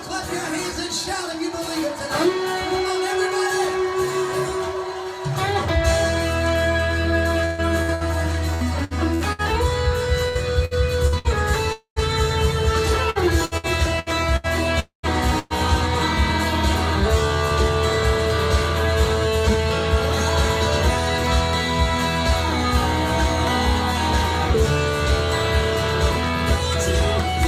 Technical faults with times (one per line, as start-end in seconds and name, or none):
7.45-9.41 repeated packet loss (robotic sound)
10.28-11.27 repeated packet loss (robotic sound)
11.72-11.99 long network dropout
13.10-14.47 repeated packet loss (robotic sound)
14.80-15.06 long network dropout
15.39-15.53 burst of packet loss